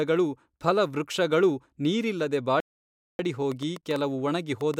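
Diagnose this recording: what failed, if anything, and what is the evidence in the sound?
A playback stall at the playback stage, likely the player running short of data or its thread being blocked, cuts the speech off mid-flow from 2.60 s to 3.19 s. The output goes silent for about 0.59 s, then the speech resumes.

A train of clicks, likely interference picked up in the analogue wiring or a faulty connection or power supply, starts at 3.52 s and runs to the end. Similar pulses arrive about 5.5 times per second at uneven spacing, ticking clearly above the speech level.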